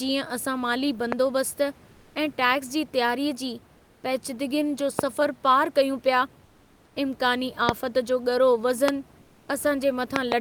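Speech, with two recurring faults. Loud pops, each roughly 15 to 20 dB above the speech, strike at 1.12, 4.99, 7.69 and 8.88 s, with a double pop between 10.16 and 10.34 s. Likely electrical glitches. Comfort noise replaces the background at 1.91 to 2.15, 3.77 to 4.03, 6.45 to 6.95 and 9.21 to 9.47 s. The room noise turns flat and featureless and drops by about 3 to 4 dB, likely from Opus discontinuous transmission.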